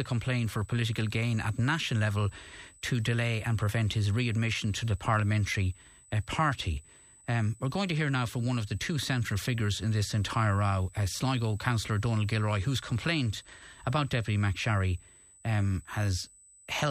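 A thin, fixed-pitch whine at 8 kHz sits under the speech from start to finish, roughly 25 dB below it, audible as a steady high squeal in the pauses. This is USB whine: the bus drawing current in 125-microsecond microframes, which repeat 8000 times a second. That pulsing load leaks into the audio through a shared power or ground path, so the interface's own housekeeping ends up recorded as a constant tone.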